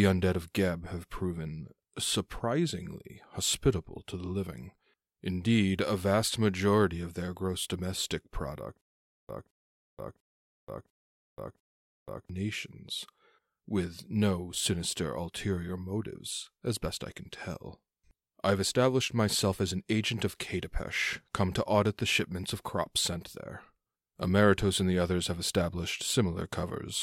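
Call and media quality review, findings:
Stutter with silent gaps, 8.81–12.29 s, after "their gross domestic product". A 0.22 s fragment repeats five times, each followed by 0.48 s of silence (0.70 s period). Likely a player or stream stall: each retry replays the last fragment, then runs empty. Intended audio lost.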